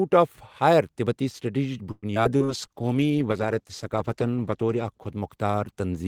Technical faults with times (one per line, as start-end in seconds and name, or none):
1.91-2.51 repeated packet loss (robotic sound)
2.44-6.07 call bitrate drop
2.69-3.13 jitter buffer slow-down